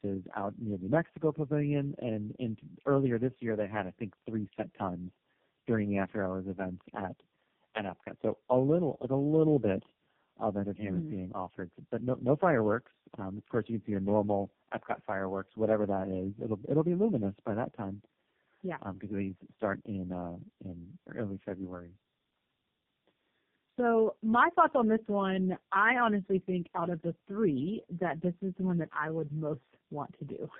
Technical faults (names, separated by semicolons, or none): tandem speech coding